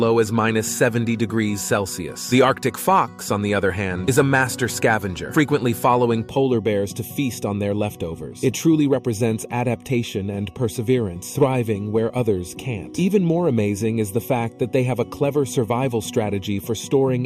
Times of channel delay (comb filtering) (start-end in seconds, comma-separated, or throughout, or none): 6.29-17.26